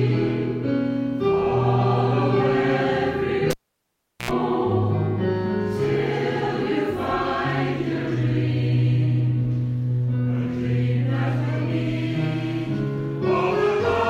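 A cable pulled and plugged in runs from 3.51 to 4.31 s. A live lead is yanked from its socket, causing a pop, then near silence for about 0.75 s while nothing is connected. As the plug goes back in, only the tip touches at first, so for roughly 84 ms the ungrounded input picks up a 60 Hz mains buzz. A second pop follows as the connection seats fully and the sound returns.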